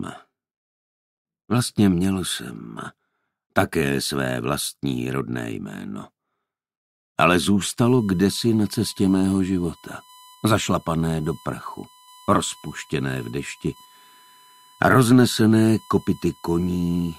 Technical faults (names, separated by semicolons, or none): USB whine